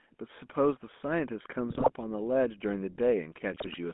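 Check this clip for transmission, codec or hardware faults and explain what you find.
You've got a phone-call chain here: the whole clip carries GSM full-rate codec coloration, and there are two short bursts of GSM bit errors near the middle and the end.

GSM full-rate codec runs the full length. The audio sits in a narrow band from about 200 Hz up to 3.5 kHz, so there's no air on top and little low end. The coder rebuilds the vocal tract from a filter model and excites it with a sparse, evenly spaced pulse train instead of the real waveform. That's what gives the speech its buzzy, gravelly grain, and here it's plainly audible. The character fits the old 13 kbps full-rate coder.

GSM bit errors hit from 1.7 to 1.92 s and again from 3.52 to 3.75 s. In each burst the speech briefly turns to squawks, pops and a gargling smear, then recovers. This happens when corrupted bits from a weak radio link get into the decoder's filter, pitch and gain parameters. 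A bad value distorts the spectral shape or spikes the level for that frame. Each burst lasts a bit over 0.2 s, with nine damaged frames in the first and eleven in the second.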